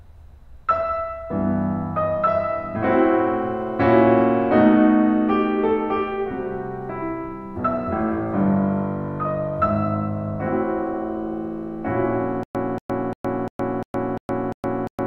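From 12.43 s onward the music falls into a stutter with silent gaps. A 233 ms fragment plays seven times, each followed by 115 ms of digital silence, likely from a stalled player retrying. On the waveform, identical blocks alternate with flat lines. The spectrogram shows repeated slices separated by blank columns.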